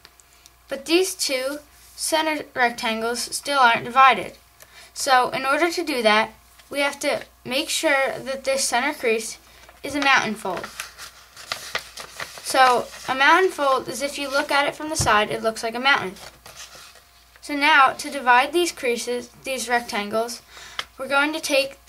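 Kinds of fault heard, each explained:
No technical faults heard.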